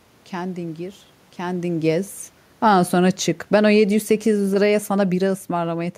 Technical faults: automatic gain falling

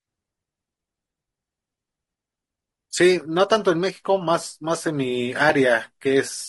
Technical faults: low-delay AAC compression

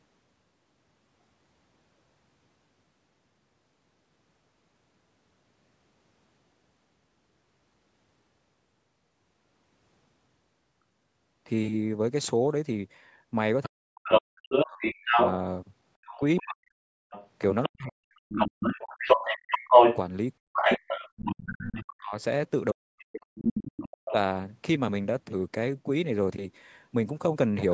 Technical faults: other side's voice leaking through; speech suppressed in double talk

